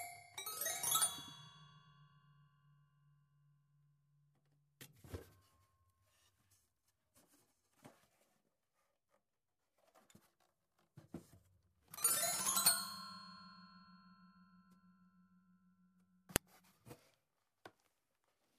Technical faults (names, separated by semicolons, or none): file header played as audio